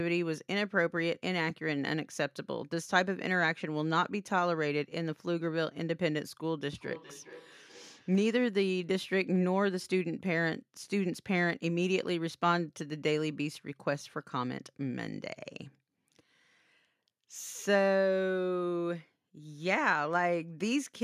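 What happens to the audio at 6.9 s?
At 6.9 s the speech falls into a feedback echo between two devices, running from 6.69 to 8.54 s. A second device in the room replays this signal, the microphone picks it up again, and the echo canceller can't remove sound it didn't play itself. The speech returns at a fixed interval of about four tenths of a second, thinner and ringier, peaking at about 16 dB below the speech. Room reverberation would smear the sound continuously rather than repeat it at a regular interval.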